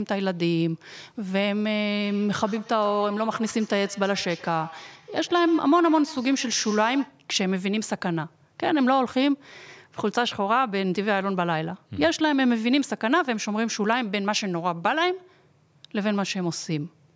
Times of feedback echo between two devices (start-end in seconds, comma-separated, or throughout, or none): 2.02-7.20